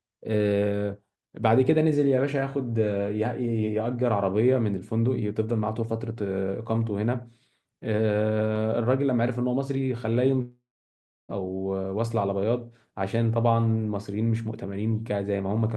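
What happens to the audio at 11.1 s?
At 11.1 s the speech sits inside a long network dropout, 10.41 to 11.31 s. The last sound smears into a fading buzz, then about 0.68 s of silence, likely from packets not arriving. Unlike a brief packet-loss glitch, nearly 0.9 s of speech is lost outright.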